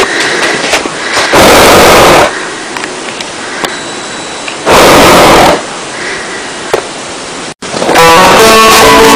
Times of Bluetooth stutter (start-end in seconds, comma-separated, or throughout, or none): none